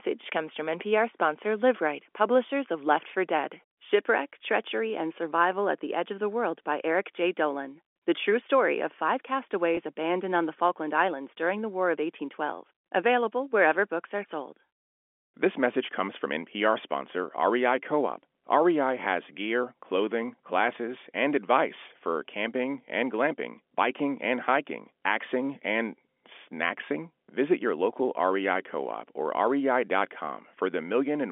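A speech recording carried over a G.711 telephone line, so the sound is limited to the narrow band of about 250 Hz to 3.4 kHz. At 9.75 to 9.77 s there is a packet loss with pitch repetition. About 20 ms of audio went missing, which fits two lost 10 ms packets. The receiver filled the gap by repeating the last pitch period. Because the gap is so short, it comes across as a brief, slightly held, buzzy tone.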